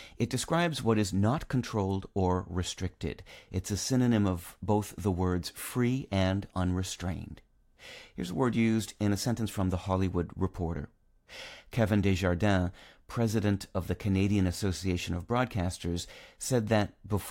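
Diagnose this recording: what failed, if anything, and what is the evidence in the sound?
Nothing failed; no faults heard.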